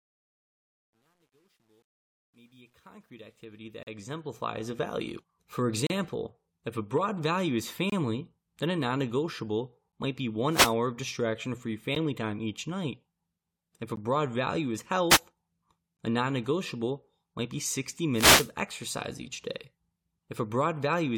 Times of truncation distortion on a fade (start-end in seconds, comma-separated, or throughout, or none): 0.00-4.77